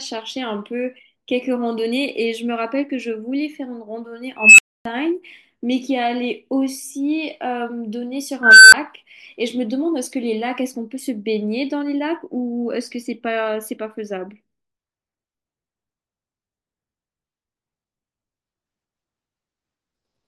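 At 4.37 s and again at 8.43 s, an unstable filter takes over the speech. Its runaway recursion swells a tone, near 3 kHz and then near 1.5 kHz, over about 0.22 s and 0.29 s into clipping. Overflow then cuts the sound for 270 ms and 10 ms. Acoustic feedback howl grows more slowly and never drops abruptly to silence.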